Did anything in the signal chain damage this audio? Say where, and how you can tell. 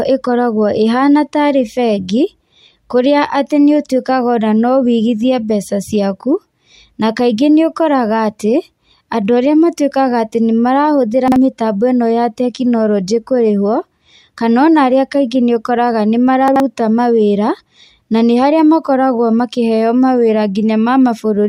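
Yes. Chunks out of order at 11.28 to 11.36 s and 16.48 to 16.6 s: the speech jumbles briefly at the hard joins. A 40 ms block lands one slot late, then two slots late. This points to a buffer or network stage reassembling audio in the wrong sequence.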